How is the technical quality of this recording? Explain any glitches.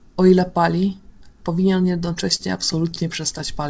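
The recording carries a stutter in its final stretch, heard through a call path whose band stops at 8 kHz, which points to wideband G.722 at around 64 kbps.

From 2.06 to 3.41 s, repeated stalls (stutter) make the speech drag and catch twelve times, each hitch at most 30 ms. Packets arrived late, the jitter buffer kept emptying, and the receiver stretched the last sound to bridge the gaps, about 134 ms in total, or roughly a tenth of that stretch. Nothing is lost.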